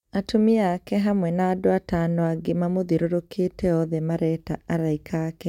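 No technical faults can be heard in this recording.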